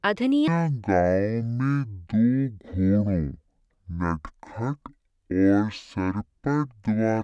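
From 0.48 s to the end, the speech has a wrong sample rate fault. It plays at half speed and a full octave lower, 12 semitones down, sounding slow and deep. That fits audio recorded at 44.1 kHz being played back at about 22 kHz without conversion.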